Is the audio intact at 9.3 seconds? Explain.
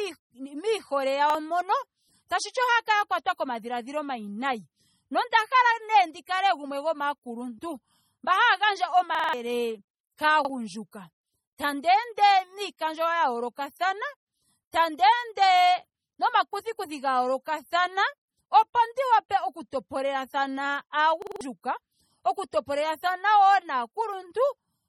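No. From 9.15 to 9.33 s a roughly 46 ms fragment stutters, sounding four extra times with hard joins: a repeated buffer, where late audio forced replays, fitting a 2048-sample buffer and costing about a fifth of a second. Throughout, the sound is watery and swirly with nothing above 17.7 kHz, likely heavy MP3 compression at a low bitrate.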